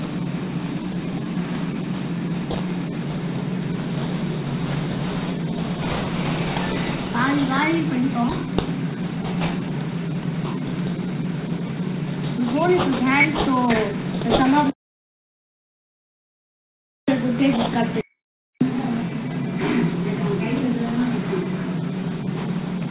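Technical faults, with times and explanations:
Throughout: aliasing. Content above 4 kHz folds back to unrelated pitches, around 10 dB below the signal. This fits resampling to 8 kHz without a filter.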